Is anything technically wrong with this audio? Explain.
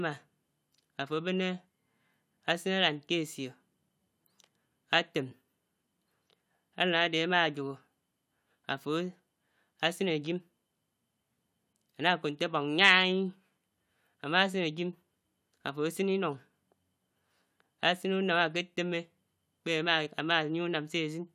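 No, nothing stood out as technically wrong when listening to this speech recording.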